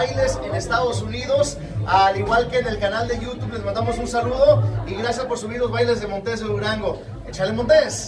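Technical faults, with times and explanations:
No faults are detected in any part of the recording.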